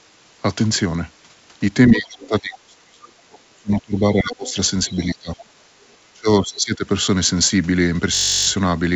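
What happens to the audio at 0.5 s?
Nothing goes wrong at 0.5 s; the speech passes through intact, carried by a wideband call path whose content stops at 8 kHz, which fits a G.722 codec.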